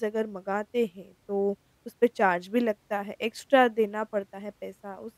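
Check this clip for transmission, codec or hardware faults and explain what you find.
Nothing faulty turns up anywhere in this speech recording.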